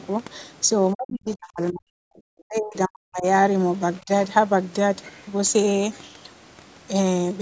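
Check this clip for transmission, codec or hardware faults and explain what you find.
One fault recurs. From 0.93 to 1.94 s and 2.31 to 3.25 s the speech dips very deeply and breaks up, with a brief, shallow dip again at 4.01 to 4.1 s. This is likely speech suppressed in double talk: the echo canceller mistook the talker for loudspeaker echo and turned both down. Audio reaches about 8 kHz, consistent with normal call microphone processing.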